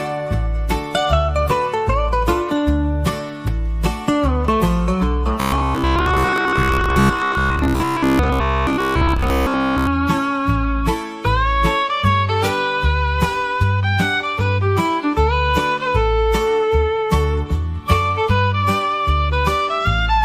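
From 5.40 to 9.87 s the sound turns rigid and metallic, a fixed buzz at 66.7 Hz that only loosely tracks the material. This robotic sound from repeated short buffers is likely caused by audio arriving too slowly, with most of that stretch filled by repeating 15 ms slices.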